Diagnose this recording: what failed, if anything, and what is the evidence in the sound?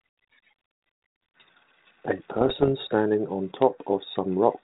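Bit errors on the ADPCM link struck from 2.36 to 2.69 s. Each flip knocks the decoder's step size and predictor off, leaving pops, rough bursts and level jumps.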